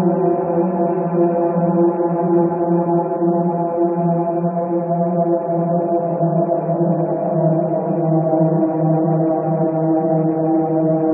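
No technical fault can be heard anywhere in the signal, which holds steady from its first moment to its last.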